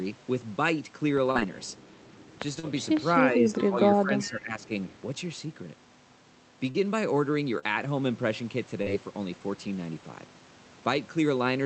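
Early on there are two short concealed packet losses, at 1.31 s and 2.59 s. Each is a gap of about 40 ms that never arrived in time, so the receiver patched it by stretching out what it had just played and then blending back into the real audio. You hear a quick smear or wobble, and a short consonant sitting in the gap can get swallowed.

From 3.17 to 3.78 s the talker dips, by about 5 dB at worst. It's likely speech suppressed in double talk: both ends were talking, and the echo canceller couldn't tell the near talker from loudspeaker echo, so it ducked everything. Inside that stretch, at 3.62 s, there's a faint echo leak. A delayed copy of the voice comes back about 382 ms late and sits about 20 dB under the speech, likely residue the far end's canceller missed.

The same pairing repeats. Suppression runs from 3.97 to 4.68 s and cuts deeper, about 10 dB. Another scrap of echo at that same 382 ms delay appears at 4.20 s.

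After that the concealment smears come back at 6.71, 7.59 and 8.82 s, each again about 40 ms of missing audio filled in. The Opus call path's 8 kHz top end sits under all of it.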